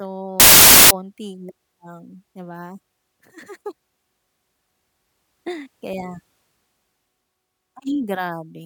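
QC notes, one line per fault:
0.40–0.91 s, samples built from the wrong bytes: the speech becomes loud, harsh broadband noise. Misassembled bytes turn the noisy low bits into each sample's dominant part.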